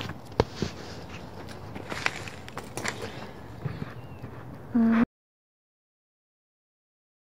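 Audio dropout to silence from 5.04 s to the end: the sound cuts off mid-flow and the last 2.2 s are dead silence, with no room tone at all. The input was likely lost, so the recorder kept writing silence.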